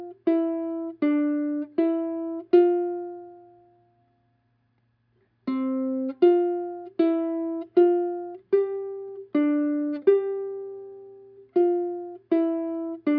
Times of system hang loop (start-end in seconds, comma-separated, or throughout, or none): none